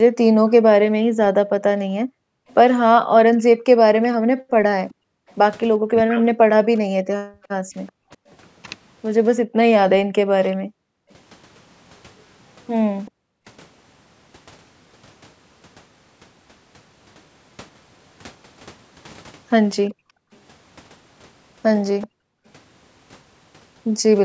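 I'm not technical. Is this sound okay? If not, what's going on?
No. From 0.03 to 13.47 s and again from 19.88 to 22.46 s there's speech suppressed in double talk: the voice keeps dipping or nearly vanishing, likely because both sides talked at once. There's also an echo leak from 2.49 to 13.11 s and from 19.93 to 22.07 s, a faint copy of the voice trailing 385 ms behind, likely from a loudspeaker echo that wasn't fully cancelled.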